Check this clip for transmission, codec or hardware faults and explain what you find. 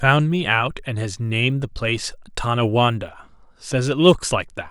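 One fault runs throughout the speech: a resampler restarted on every block. Each 20 ms block is converted in isolation, which fits a 44.1 kHz to 48 kHz conversion, leaving an error at every block edge. The result is a 50 Hz buzz that, unlike mains hum, vanishes whenever the speech pauses.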